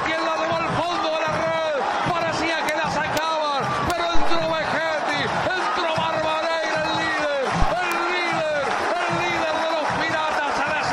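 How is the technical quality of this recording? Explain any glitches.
Two glitches stand out, both phantom power thumps. The first runs from 4.15 to 4.46 s, peaking at about −7 dBFS and dying away over roughly 70 ms. The second, at 7.62 to 7.71 s, is shorter and a touch louder at about −6 dBFS, decaying in about 21 ms. Each is a deep low thud from a supply being switched on a live input, with the voltage step pushed through the coupling capacitors.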